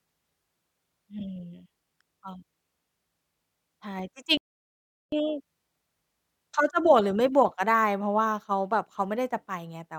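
A playback stall cuts this speech clip from 4.37 to 5.12 s, a silence of about 0.75 s in mid-flow before the sound resumes. The likely cause is the player running out of buffered data or having its audio thread blocked, so output halts until it recovers.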